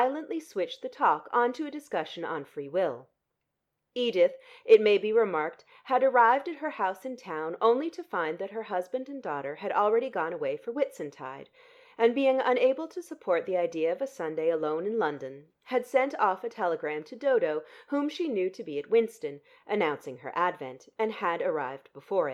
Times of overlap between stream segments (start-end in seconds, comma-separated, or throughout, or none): none